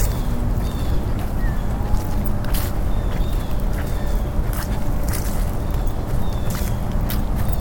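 From start to end, a block size mismatch (truncated) discards the tail of every block, so a buzz sits at the block rate of 91.9 Hz while the sound keeps its normal speed and pitch.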